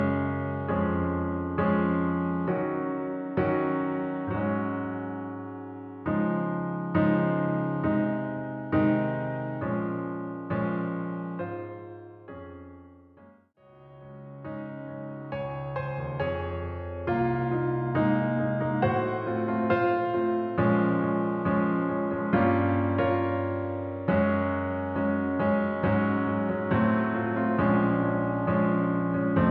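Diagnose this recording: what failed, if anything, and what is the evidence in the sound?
Nothing failed; no faults heard.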